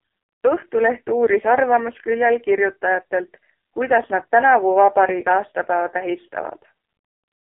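This speech clip carries AMR narrowband mobile codec damage from start to finish. The sound is boxed into a telephone band of roughly 250 Hz to 3.5 kHz, and nothing passes above 3.8 kHz. The codec models speech as a vocal-tract filter fed by sparse pulses, so detail is rebuilt rather than kept. Here the damage is heavy. The voice sounds buzzy and synthetic, which fits a low AMR-NB mode near 5.9 kbps.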